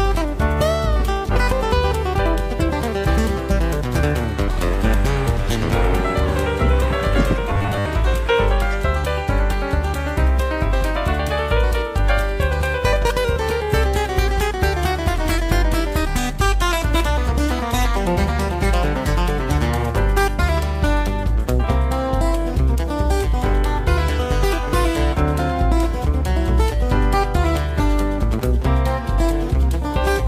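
From 7.51 to 7.86 s the sound turns into a rigid, metallic buzz fixed at 100 Hz, the robotic sound from repeated short buffers. The cause is likely a starved playback path: new audio arrived too seldom, so the same 10 ms fragment was looped to fill the gap, and most of the material in that stretch was skipped. Because the loop length sets the pitch, the buzz holds at 100 Hz while the underlying sound's shape still comes through roughly.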